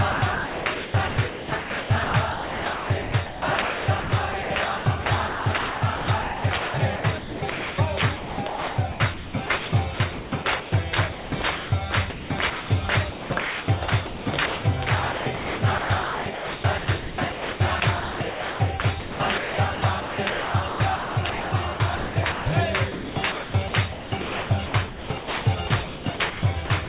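From 0.12 to 4.5 s, 4.78 to 7.78 s, 8.16 to 10.72 s, 11.12 to 12.7 s, 13.1 to 14.64 s, 15.12 to 22.46 s and 22.92 to 26.89 s, the sound is chopped by the voice detector. Quieter passages and edges drop out and are replaced by steady synthetic comfort noise, likely because a sender's detector kept switching transmission off. This fill ranges from 0.8 s to 4 s per stretch. Unlike packet-loss dropouts, the gaps are filled with synthetic noise rather than silence or repeated fragments. Throughout, the call path passes nothing above 4 kHz.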